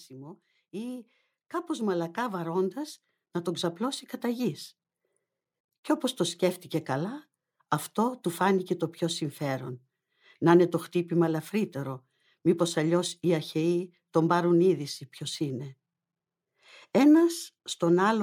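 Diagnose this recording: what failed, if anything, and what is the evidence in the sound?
Automatic gain rising, in the call-processing stage: from 0.08 to 4.51 s the level climbs by about 12 dB, speech and background swelling together. The waveform envelope widens steadily, and the spectrogram brightens evenly across all bands, noise floor included, as the controller raises its gain on quiet input.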